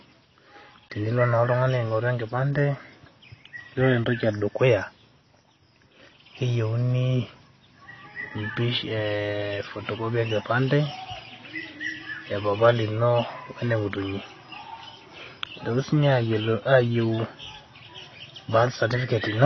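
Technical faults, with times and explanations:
Throughout, AAC compression: the encoder was likely starved of bits, with the damage pointing to AAC-LC at around 24 kbps, so it discarded everything above about 6.5 kHz and quantised the remaining frequency lines coarsely. The speech therefore sounds dull and muffled, missing its upper detail, and sibilants and sustained vowels carry a warbling, fizzy smear where spectral holes open and close from frame to frame.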